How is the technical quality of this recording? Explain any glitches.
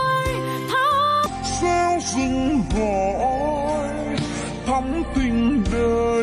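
The recording has one clear technical problem, a wrong sample rate fault. From 1.26 s to the end, the audio plays at two-thirds of its proper speed. The samples are being clocked out more slowly than they were captured, with no rate conversion, so timing and pitch shift together. Everything after 1.26 s is stretched to 0.667 times normal speed and drops about 7.02 semitones, sounding lower and slower. That ratio fits material recorded at 48 kHz but played back at 32 kHz.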